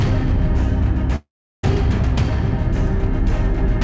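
A long network dropout likely stopped audio arriving from 1.16 to 1.65 s. The receiver stretched the last sound into a fading buzz or hiss that gives way to silence, and the audio resumes at 1.65 s with roughly half a second lost. The band ends at 8 kHz, which fits a G.722 call codec.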